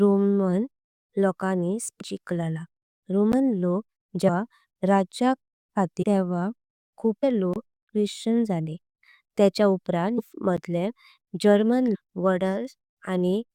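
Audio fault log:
2.00 to 13.42 s, compressed frames skipped: at 2.00, 4.27–4.29, 6.02–6.04, 7.22, 10.17–10.19 (just after "त्या चीव उपरां"), 11.94–11.96 and 13.42 s, the speech jumps ahead by roughly a fifth to seven-tenths of a second. Whole 23.2 ms frames were never decoded.
3.33 to 10.57 s, block of digital silence: at 3.33, 7.54–7.56 and 10.57 s, the speech drops abruptly to silence for 11.6 ms, 23.2 ms and 11.6 ms. These lengths fit unfilled 512- and 1024-sample output buffers. The cut has no fade, and the holes are heard as ticks or short dropouts.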